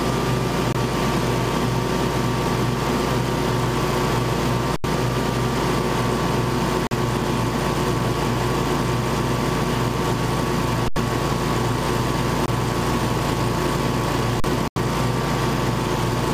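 At 0.73–0.75 s, 6.87–6.91 s, 12.46–12.48 s and 14.68–14.76 s, the program likely failed to fill its output buffer in time, leaving a block of digital silence. The sound drops to zero and back with no fade. The short blocks of about 21 ms, which fit 1024 samples, are heard as short holes. The 43 ms block at 6.87 s and the 85 ms block at 14.68 s are heard as holes.

At 4.76–4.84 s, 10.88–10.96 s and 14.40–14.44 s, an underrun with held sample occurred. The converter froze on its last value for 80, 80 and 40 ms. The sound flattens without a click, and about 70, 70 and 40 ms of live audio were lost meanwhile.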